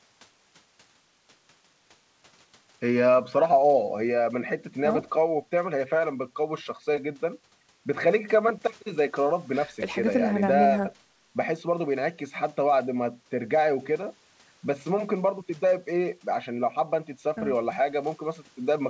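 Speech carried over a call path shows no technical faults, with the usual coding noise of a wideband call codec and nothing above about 8 kHz, which fits G.722.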